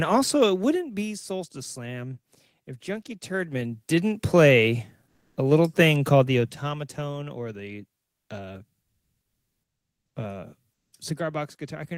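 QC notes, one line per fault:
5.07–10.93 s, comfort noise in place of the background: in four pauses (5.07–5.37 s before "a little thing", 8.03–8.29 s after "or the", 8.81–10.15 s after "or the uh", 10.73–10.93 s), the real background is swapped for smoother synthetic noise. It is about 3 dB louder in the first and about 12, 4 and 4 dB quieter in the rest. The likely cause is discontinuous transmission, with the receiver filling the unsent gaps.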